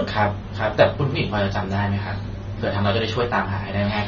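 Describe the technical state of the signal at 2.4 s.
At 2.4 s, as across the whole clip, the speech is dull with nothing above 7 kHz and has a warbling, smeared texture, likely from low-bitrate AAC compression rather than a plain low-pass filter.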